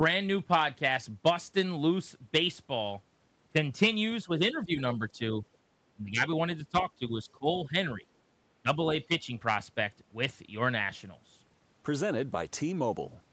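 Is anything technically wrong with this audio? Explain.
Yes. The speech dips in level in three stretches: 4.24–5.21 s, 5.95–8.03 s and 8.63–9.31 s. This is likely speech suppressed in double talk. With both ends talking at once, the echo canceller could not tell this talker apart from the returning loudspeaker echo, so it attenuated everything. The drops reach roughly 10 dB in the first and third stretches and about 15 dB in the middle one. They are heard as brief ducking rather than steady muting.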